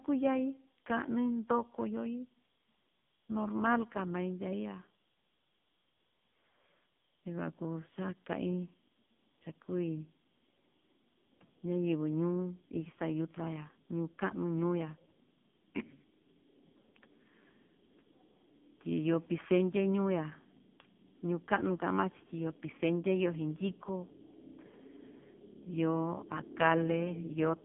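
Speech with heavy AMR narrowband mobile codec damage throughout: a buzzy, synthetic tone suggesting a 5.9 kbps mode, and a spectrogram showing energy only from 150 Hz to 3.5 kHz, with nothing above 3.6 kHz.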